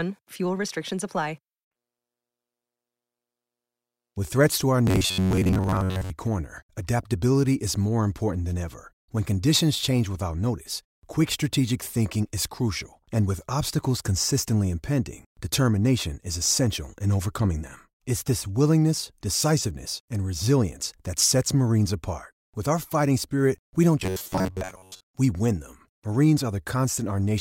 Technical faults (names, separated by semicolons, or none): robotic sound from repeated short buffers